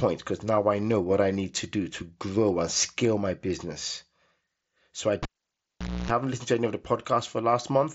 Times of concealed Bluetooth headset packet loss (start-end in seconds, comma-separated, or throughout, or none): 1.34